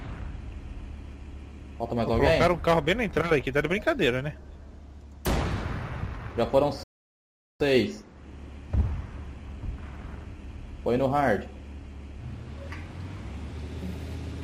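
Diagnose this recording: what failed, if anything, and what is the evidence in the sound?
The failure is at playback: a rebuffering stall. At 6.83 s the sound cuts to silence and stays there until 7.60 s, then picks up exactly where it broke off. The player's buffer ran dry and it waited for more data, adding about 0.77 s to the running time. That distinguishes it from a network dropout or packet-loss gap, which would discard audio. Here nothing is skipped, and the material on either side joins seamlessly once playback resumes.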